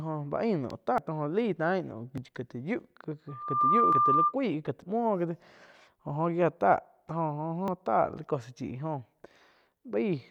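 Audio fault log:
0.98, 2.18, 3.93, 4.82 and 7.68 s: dropped buffer (overrun). Each has the speech jumping forward with no gap. Roughly 150 ms is missing at 0.98 and 4.82 s and about 40 ms at the others, likely because input was not read before the hardware overwrote it.
3.28–4.34 s: loudspeaker feedback squeal. A steady 1.2 kHz tone swells over about a third of a second to about 5 dB above the speech. Microphone and loudspeaker form a loop whose gain exceeds one at that frequency, so it grows by itself.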